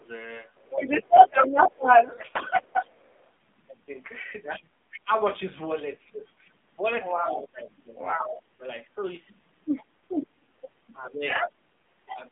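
Throughout, the AMR narrowband mobile codec at 7.4 kbps confines the sound to roughly 150 Hz to 3.5 kHz, giving plainly audible buzzy, synthetic coloration. From 0.0 to 2.51 s, the talker dips by up to about 15 dB for under a second in total, likely speech suppressed in double talk by the echo canceller. It happens again from 7.2 to 8.62 s, and briefly from 11.42 to 11.54 s with a dip of about 10 dB. The other side's voice likely leaks through the canceller from 0.55 to 3.31 s louder than the talker, then at a similar level from 7.02 to 8.42 s and from 9.65 to 12.19 s. From 10.96 to 11.08 s, AMR bit errors turn the sound hoarse and gargly while pitch and level hold, which fits five corrupted 20 ms frames.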